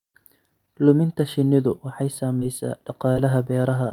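Speech clip with two short concealed packet losses. After "shinnidu waxay", from 2.39 to 2.43 s, and again from 3.13 to 3.17 s, about 20 ms of audio never arrived. The decoder bridged each gap by extending the preceding sound, then blended back, leaving a brief smear.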